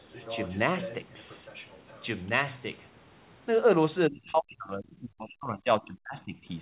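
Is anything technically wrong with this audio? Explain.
Yes, two problems. Other side's voice leaking through: from 0.00 to 0.58 s and 0.81 to 2.06 s a second voice sits roughly 15 dB under the speech, likely loudspeaker echo the canceller failed to remove.

Speech suppressed in double talk: between 4.09 and 6.36 s the speech repeatedly dips, at worst by around 40 dB over about two seconds in total, likely the canceller attenuating everything while both sides talked.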